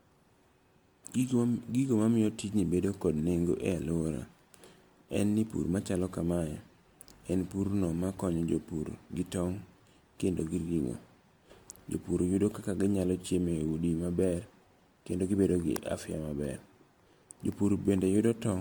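Across the whole speech clip there is generation loss: the audio has a swirly, smeared, hollow quality and blurred consonant attacks, with spectral holes and accumulated noise heavier than a single encode would leave. The likely cause is repeated lossy coding, around seven MP3 passes, each requantising on a shifted frame grid so the errors stack. The passes ran at bitrates near 100 kbit/s, and there is no content above 20.1 kHz.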